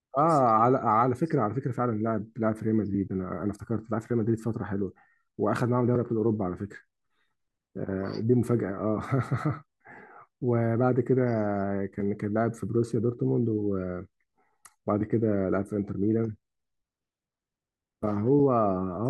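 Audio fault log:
No technical faults are present in the signal, and the speech arrives intact from the first moment to the last.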